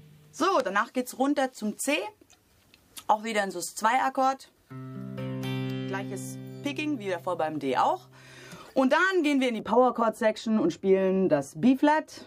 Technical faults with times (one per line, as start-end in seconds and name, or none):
9.60-12.26 de-emphasis applied wrongly